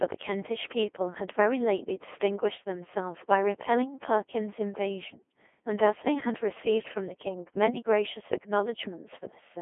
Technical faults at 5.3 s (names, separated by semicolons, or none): Codec 2 vocoder